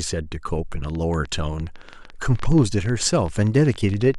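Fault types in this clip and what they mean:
Train of clicks: from 0.84 s to 4.15 s, some forty sharp ticks pop over the speech and its pauses at an uneven pace, about 11.5 per second, peaking roughly as loud as the speech. The likely cause is electrical interference or a faulty connection or power supply.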